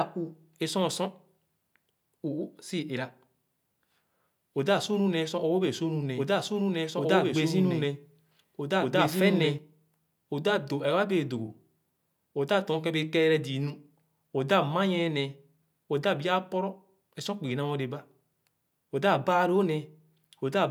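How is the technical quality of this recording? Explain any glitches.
One glitch affects the recording. From 6.17 to 9.59 s a doubled audio track appears. A second, equally loud copy of the speech lags by about 1.5 s and starts and stops abruptly, likely from a second, slower capture path.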